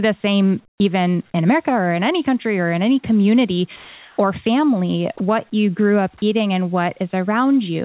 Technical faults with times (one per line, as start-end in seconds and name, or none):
0.68-0.80 comfort noise in place of the background
1.32-1.34 sound dropped by the voice detector
3.76-4.18 sound dropped by the voice detector
5.18-5.20 sound dropped by the voice detector